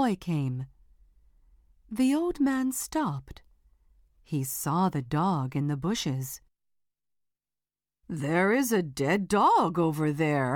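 No technical faults can be heard anywhere in the clip. Nothing in the audio calls for any note on timing or cause.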